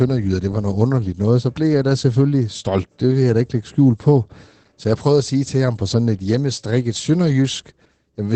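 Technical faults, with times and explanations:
Throughout: Opus voice compression. The speech sounds muffled and hoarse, with nothing above about 8.8 kHz. That fits SILK running wideband at roughly 12 kbps. It drops the top of the band and codes the excitation coarsely, which leaves that muffled, faintly robotic edge.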